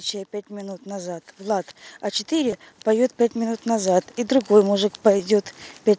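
A speech recording in which automatic gain rising lifts voice and background together from 0.47 to 5.4 s, by about 13 dB, visible as a waveform envelope that steadily widens. Concealed Bluetooth headset packet loss appears at 2.51 s (15 ms, which fits two lost frames) and 5.19 s (7.5 ms): the receiver repeats recent waveform, showing as brief repeated periodic cycles on the waveform. The spectrogram stops at 8 kHz, as expected for a wideband mSBC headset link.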